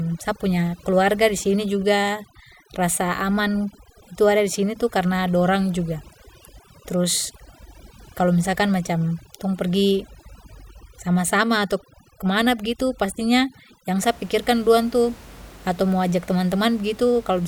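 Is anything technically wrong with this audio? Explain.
Yes. From 0.0 to 14.0 s there's overdone noise removal. An aggressive denoiser is clamping bands near its noise estimate, so the background drops to twinkly near-silence and quiet parts of the voice go with it. The room noise sits about 24 dB under the speech.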